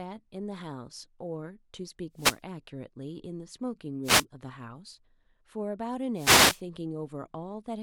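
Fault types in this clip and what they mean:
Wireless microphone noise hit: the FM radio link fades as reflections cancel, so receiver noise rises into three short static swishes over the speech.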